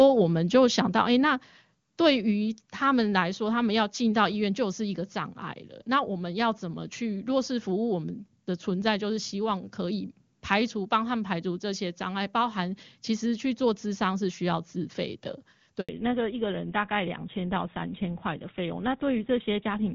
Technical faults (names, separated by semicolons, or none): handover gap; fallback to narrowband